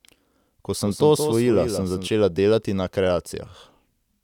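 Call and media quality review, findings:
Doubled audio track in the speech, 0.85 s to 2.07 s. A second full-band copy trails the original by roughly 200 ms, about 10 dB quieter. No decay, no room colour. Starts and stops abruptly. Likely cause: a slower second capture path mixed in with the main one.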